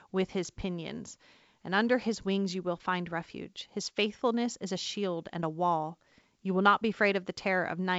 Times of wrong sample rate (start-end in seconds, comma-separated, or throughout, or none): none